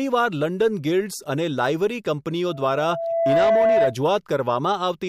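From 2.48 to 3.96 s, loudspeaker feedback squeal: a 665 Hz tone swells over about a second to roughly 5 dB above the speech. Unlike steady hum, it grows by itself.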